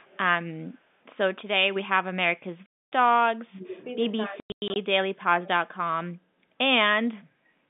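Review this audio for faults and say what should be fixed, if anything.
Echo leak runs from 0.0 to 0.18 s: a faint copy of the sound returns about 35 dB down, 228 ms late. That is the far end's loudspeaker signal that the echo canceller likely failed to remove. A distinct delay this long separates it from room reverberation, which smears the sound rather than repeating it. Prevention: give the far-end echo canceller enough tail length and convergence time.

Packet loss filled with silence cuts a 260 ms hole from 2.66 to 2.92 s, which fits thirteen 20 ms packets. From 4.4 to 4.76 s, 240 ms more is lost in scattered gaps, the longest lasting 100 ms. Hard edges mark these as lost packets rather than suppression. Prevention: use a jitter buffer with packet loss concealment instead of silence insertion.

Speech suppressed in double talk occurs from 3.32 to 3.85 s and from 4.28 to 5.48 s. The sound sinks by as much as 35 dB, likely because the echo canceller took simultaneous talk for echo and attenuated it. 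These dips are attenuation rather than dropped packets. Prevention: tune double-talk detection so near-end speech is not attenuated. The narrow G.711 A-law telephone band is audible throughout.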